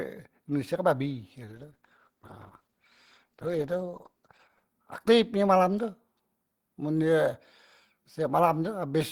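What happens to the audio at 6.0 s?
Nothing goes wrong at 6.0 s: the speech runs on intact through that moment, with no dropout, click or distortion.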